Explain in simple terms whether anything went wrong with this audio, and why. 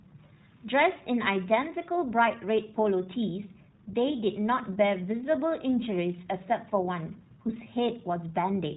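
Yes, the whole recording went through the iLBC codec, a phone-call style voice codec. Everything above about 4 kHz is gone, so it sounds muffled, and the speech has a slightly rough, synthetic edge, which fits chopping it into 20 ms chunks that are each coded separately.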